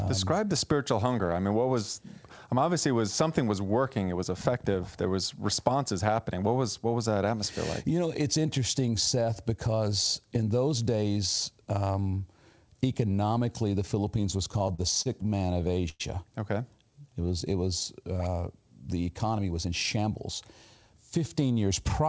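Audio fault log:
14.52–16.02 s, repeated stalls (stutter): Packets kept arriving too late for playback, so the jitter buffer ran dry fifteen times in this span. Each time, the receiver stretched out the last sound until fresh audio came, with the longest wait at 105 ms, faded as it was held. About 296 ms of filler fills roughly a fifth of the stretch. Nothing is actually lost, but the sound catches and drags in a halting stutter.
16.78–17.27 s, jitter buffer slow-down: Just before "it was uh the", the buffer was short of reserve, so the receiver repeated single pitch periods and slices of pause again and again to rebuild it. That adds 88 ms and plays this half-second at 84% speed. The pitch stays where it was, so the sound is simply drawn out and sluggish.
19.24–20.11 s, jitter buffer speed-up: Right after "it was uh the", the buffer had more audio queued than its target, so the receiver trimmed away short pieces, each one or a few pitch periods long, in quick succession. 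About a tenth of a second disappears, and the passage runs at 109% speed without any change in pitch. It comes across as rushed, with the G.722-style band limit of nothing above 8 kHz unchanged.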